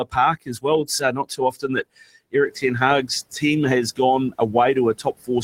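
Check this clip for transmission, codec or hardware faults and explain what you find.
The one fault is speech cut by the noise suppressor, at 0.04–0.17, 0.46–0.66, 0.85–2.03, 2.32–2.63 and 4.95–5.29 s. The suppressor mistook parts of the speech for noise and pulled them down by about 17 to 20 dB, leaving them faint and swallowed. The room noise, which rises by about 13 dB near 2.5 s, stays well below the speech.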